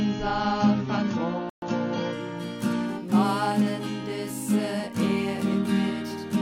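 From the first moment until 2.13 s, the audio shows an adaptive stream starting at a low bitrate. The treble is missing or synthetic, so the top end sounds dull and the coding artefacts are more obvious. At 2.13 s the full treble returns in a single step and there is no break in the sound. That pattern fits a start near 24 kbit/s AAC followed by a switch to around 96 kbit/s. A permanently band-limited recording would stay dull throughout, which this one does not.

Within that low-quality opening, between 1.50 s and 1.62 s, there is a playback stall. The output goes completely silent for about 126 ms and then the sound resumes. The likely cause is that the player briefly ran out of buffered data or its thread was blocked. A stall of this kind is a clean, fairly long hole. Packet loss or concealment would sound different, giving shorter gaps, smeared or repeated fragments, or a jump forward in the material.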